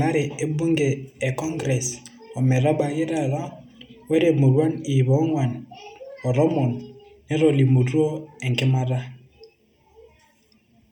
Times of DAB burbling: none

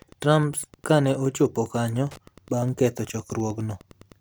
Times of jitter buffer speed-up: none

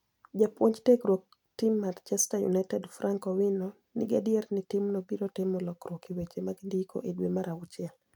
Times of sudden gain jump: none

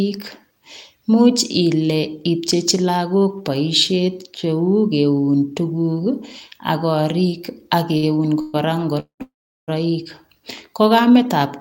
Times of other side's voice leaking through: none

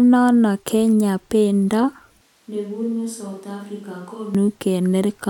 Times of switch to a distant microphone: 2.21-4.35

